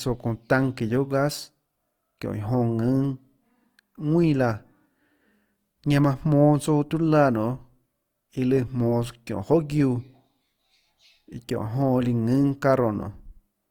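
Speech with plainly audible Opus compression throughout, likely CELT mode at roughly 24 kbps: tones sound grainy and rough, though bandwidth still extends to 20.3 kHz.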